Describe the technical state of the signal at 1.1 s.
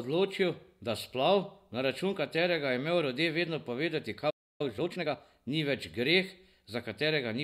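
At 1.1 s the speech signal is intact, with no audible fault at that moment.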